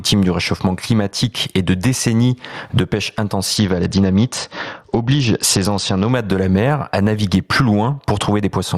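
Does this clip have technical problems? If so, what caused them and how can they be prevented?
Yes. Gain pumping runs through the whole clip. The swing is large, roughly 20 dB. Loud and quiet passages sit close in level, so the speech sounds squashed. The likely cause is input gain set far too high, with a fast limiter or compressor clamping down on each peak. To prevent it, lower the microphone gain and use gentler, slower dynamics processing.

A Bluetooth SBC bit pool drop occurs from 3.57 to 6.12 s. The treble turns dull here. A gritty, grainy noise rises under the speech. The top frequency bands lose their bits, and the remaining bands are quantised coarsely. The degree of dulling fits the bit pool falling from around 28 to about 9, near 78 kbps. Quality returns once the link recovers after 6.12 s. To prevent it, keep the phone close to the headset and reduce 2.4 GHz congestion nearby.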